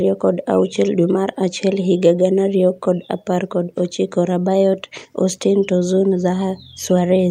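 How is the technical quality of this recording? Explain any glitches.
No glitches to explain: the speech recording has no audible technical faults.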